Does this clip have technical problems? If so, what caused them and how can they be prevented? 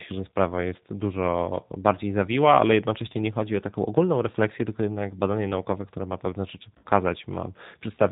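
Yes. The speech throughout carries G.729 codec damage, plainly audible as a slightly rough, synthetic quality. The decoder rebuilds each 10 ms frame from a vocal tract filter, a pitch predictor and a handful of pulses, which fits the 8 kbit/s G.729A variant. On a spectrogram, energy stops sharply at 4 kHz with nothing above, and harmonics look smeared rather than crisp. Using a wideband codec such as G.722 or Opus at a higher bitrate would prevent this.

From 6.78 to 6.85 s there is VoIP packet loss concealed by the speech codec. About 60 ms of audio went missing, consistent with three lost packets. The decoder filled the gap by extending its last pitch and filter settings while lowering the gain, so the sound turns into a fading buzzy tone or coloured noise. The waveform shows a repetitive, shrinking pattern instead of natural variation, and the spectrogram shows flat, stretched energy. 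A jitter buffer, forward error correction or better network prioritisation for voice traffic would prevent this.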